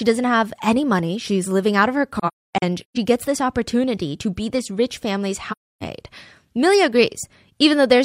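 At 2.18 to 2.97 s, just after "living out of her" and before "gets this opportunity to", AAC frame loss with muting leaves soft-edged gaps. About 0.47 s of audio is zeroed across those 0.79 s, the longest hole around 0.3 s. A second hole of 0.3 s follows at 5.51 s, after "be this rich family's". The decoder blanked the missing frames, and overlapping windows fade the sound out and in. The result is silence, not repeated or smeared sound as concealment would leave.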